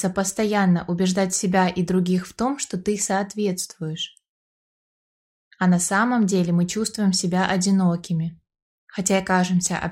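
Nothing technically wrong can be heard in this audio. The sound holds steady throughout, with nothing that calls for attention.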